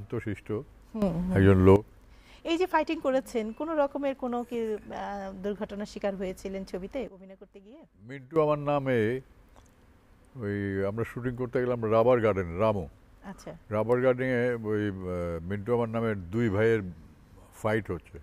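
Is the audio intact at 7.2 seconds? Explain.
No. A sudden gain jump spans 7.08 to 8.36 s. Sound and background drop together by about 14 dB, likely from an unramped gain change.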